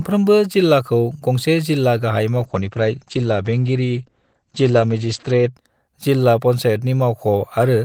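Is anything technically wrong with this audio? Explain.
Yes. There is a call bitrate drop from 2.4 s to 5.59 s, just after "गंसे जिल्ला गाहाय". The call's bandwidth estimate fell, so the encoder had to spend far fewer bits. The sound fits a drop from 32 kbps to 12 kbps, held at the low rate for about 3.1 s. The coder quantises more coarsely and narrows the band from 20 kHz to 8 kHz. The speech turns muffled and rough, then clears when the rate recovers.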